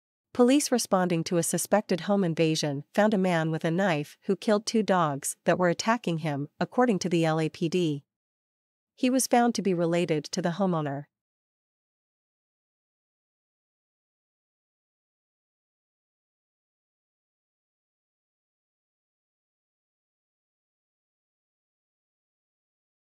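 No technical faults are audible.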